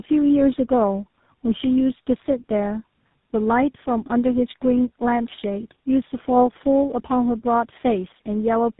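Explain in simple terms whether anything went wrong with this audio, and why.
Yes, something went wrong, and it lasts the whole clip. The speech sounds rough, muffled and warbly from start to finish, with nothing above about 3.8 kHz. This is tandem speech coding. The call passed through several networks one after another, and each squeezed the speech with its own phone codec. Three such squeezes in a row, ending with GSM full rate, each worked on the already damaged result of the one before, so the harm built up.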